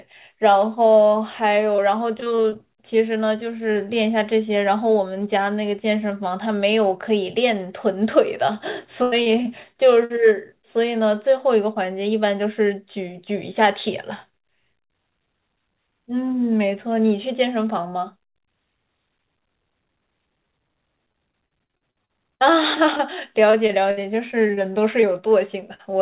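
Repeated packet loss (robotic sound) hits the speech at 1.76–2.57 s, 9.03–10.19 s and 21.13–25.81 s: lost packets are patched by extending prior sound, giving choppy sound with pieces missing.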